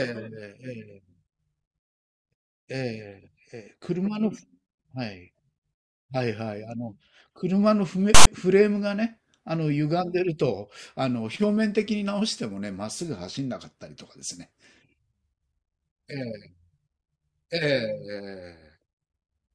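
At 8.15 s the speech is cut by file tags played as audio: about 0.12 s of tag text and zero padding read as samples gives a harsh, lopsided rasp and a stretch of silence, ending at 8.27 s. Its hard edges and mix of rasp and silence set it apart from a plain dropout.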